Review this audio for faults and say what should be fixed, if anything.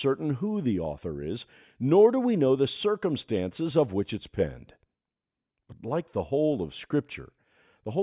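Nothing needs fixing: the speech signal is intact throughout, with no faults to report.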